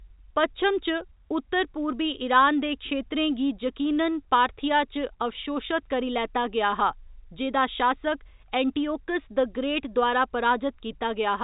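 No technical faults are audible.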